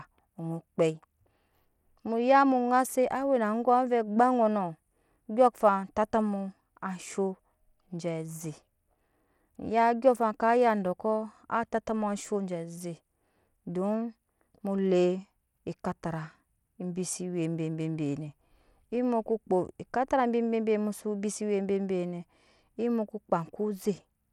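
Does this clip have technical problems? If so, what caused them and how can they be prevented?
Yes. Throughout the speech there's gritty grain and flickering treble, likely Bluetooth SBC compression at a tight bit pool, roughly 96 kbps. To prevent it, record over a cable or use a higher-quality Bluetooth codec.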